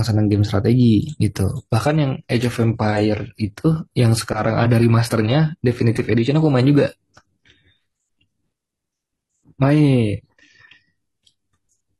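At 1.64 s the speech switches abruptly, with no gap, to an adaptive stream at a lower bitrate, and stays there to the end of the clip. The player swapped to a cheaper rendition when the connection slowed. Above that point the treble turns thin and synthetic. This fits a drop from AAC around 96 kbit/s to HE-AAC around 20 kbit/s, where spectral band replication rebuilds the highs.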